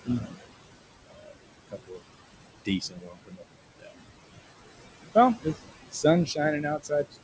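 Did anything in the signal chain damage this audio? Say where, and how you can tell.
Yes. Throughout, the background sinks by about 19 dB between phrases and rises under the speech. These are noise suppressor artifacts from the call processing stage, which turns down bands it judges to be steady noise.

Speech cut by the noise suppressor sounds swallowed and faint at 0.05–0.38 s, 1.06–2.01 s, 2.65–3.96 s and from 5.15 s to the end, dropping up to about 21 dB. The suppressor mistook quiet speech for noise.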